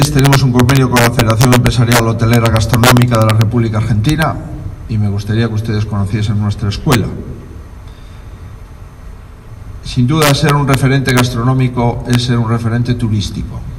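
Integer overflow at 0.02–3.41, 4.09–4.23, 6.92–6.95, 10.22–11.20 and 12.14 s: peaks about 1–4 dB past full scale wrap to the opposite sign, producing violent cracks.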